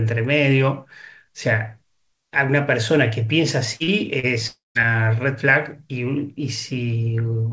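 Short concealed packet loss occurs at 3.76 to 3.83 s, 3.84 to 3.90 s and 4.19 to 4.26 s. Each time about 40 ms of speech arrived too late, and the receiver patched the gap by extending the preceding sound before blending back. The result is a brief smear or wobble.

Long network dropout, at 4.47 to 4.78 s, is likely a stretch of about 280 ms in which no audio got through. The decoder keeps the last sound going as a fading buzz or hiss that decays into silence for roughly 0.16 s. The speech then resumes with that portion gone, over a call path with nothing above 8 kHz, which fits a wideband codec such as G.722.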